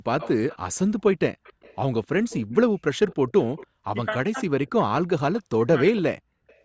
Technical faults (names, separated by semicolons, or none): echo leak; speech suppressed in double talk